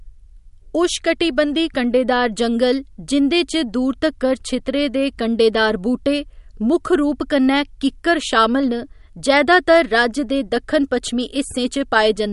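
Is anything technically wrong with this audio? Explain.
Yes. MP3 compression damage runs through the whole clip. Nothing sounds above 11.2 kHz, which fits a low bitrate around 48 kbps. The likely cause is an encoder short of bits, cutting the treble and dropping weak detail. The speech sounds watery and swirly, with metallic s sounds.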